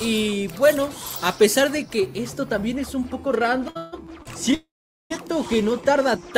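From 0 to 2.0 s the audio carries pre-emphasis left on: a treble boost following what sounds like a 50 µs FM-style curve was never undone, so 10 kHz sits about 10 dB above 1 kHz, making the sound thin, bright and sibilant. Between 3.69 and 4.54 s, packets kept arriving late, so the jitter buffer ran dry four times. This causes repeated stalls (stutter): about 250 ms of stretched, continued sound, the longest pause 151 ms, filling roughly 29% of that stretch. Nothing is lost, but the audio drags and hiccups. From 4.54 to 5.12 s comes a call audio freeze, likely from packets held up in transit and draining the buffer. The last sound is continued and then fades to silence for about 430 ms of the 559 ms gap, after which playback resumes where it stopped with nothing missing.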